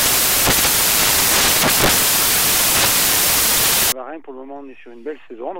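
From 0.0 to 3.92 s, samples built from the wrong bytes turn fast-changing low bits into dominant values, giving loud, harsh broadband noise: a dense, full-band spectrogram wash and a fat, clipped-looking waveform.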